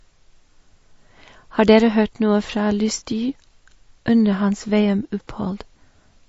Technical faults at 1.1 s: MP3 compression

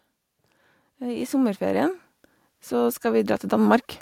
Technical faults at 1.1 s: automatic gain rising

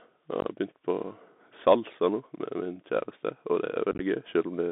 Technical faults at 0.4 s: Bluetooth CVSD headset codec; unconcealed Bluetooth headset packet loss

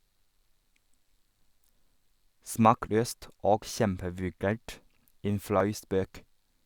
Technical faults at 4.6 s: none

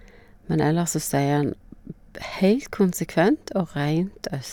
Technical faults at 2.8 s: none

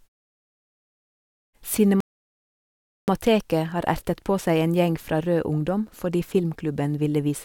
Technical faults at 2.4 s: rebuffering stall

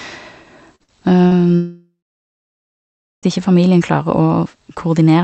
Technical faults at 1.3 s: short concealed packet loss

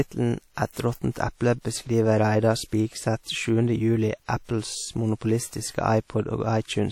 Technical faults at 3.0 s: WMA compression

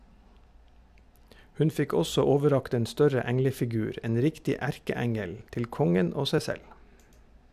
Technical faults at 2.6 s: none

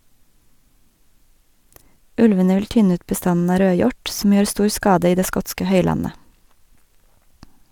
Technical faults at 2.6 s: none

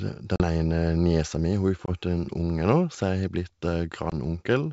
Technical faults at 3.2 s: none

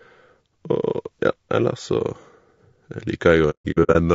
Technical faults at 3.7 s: low-delay AAC compression; AAC frame loss with muting

